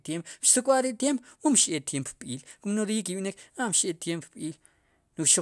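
Nothing here needs flagging, as no technical faults turn up anywhere in this speech recording.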